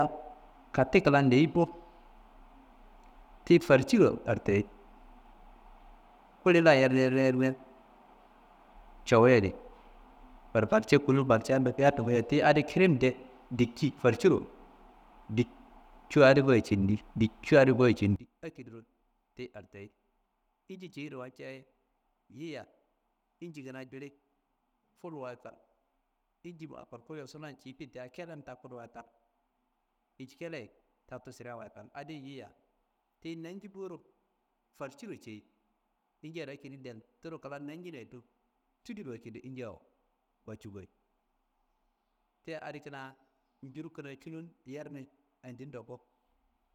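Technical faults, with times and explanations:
18.16 to 46.74 s: one channel inverted. The speech drops by about 21 dB and sounds faint to the end. The likely cause is reversed polarity on one stereo channel, so the centred voice cancels in mono, leaving only the small inter-channel difference.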